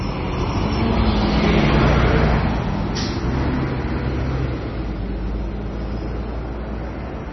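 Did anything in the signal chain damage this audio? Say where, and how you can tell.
Yes. MP3 compression runs throughout, with heavy codec damage. Nothing remains above 5.9 kHz, and the sound has a watery, swirling texture as weak frequency lines drop in and out between frames. This is likely a starved MP3 encode, consistent with a bitrate near 24 kbps.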